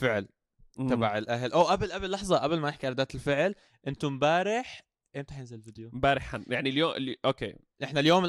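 A stage overloaded by about 2 dB, cutting speech peaks flat, causing hard clipping from 1.60 to 1.71 s and again from 8.06 to 8.15 s, heard as brief crackle.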